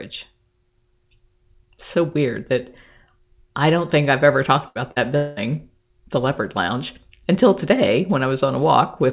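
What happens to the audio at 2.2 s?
Nothing goes wrong at 2.2 s. The speech there is intact, carried through the call path with the narrowband sound of G.711 mu-law and nothing above 4 kHz.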